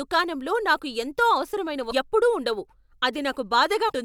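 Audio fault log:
1.87 to 1.93 s and 3.85 to 3.92 s, damaged data in a compressed stream: in both stretches the decoder received corrupted bytes in the compressed speech stream, could not parse the affected frames properly and had to hunt for the next valid frame header before decoding cleanly again. Each hit comes through as a short chirp, squawk, click or hole, about 56 and 68 ms long respectively, where the decoder's misreading of the data disrupts the speech.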